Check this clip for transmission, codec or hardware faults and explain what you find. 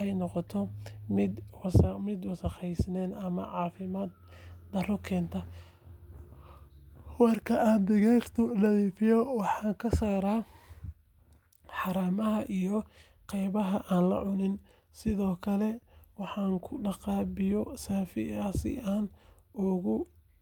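Listening through the speech, nothing stood out at any point as a problem with how the audio was carried or captured.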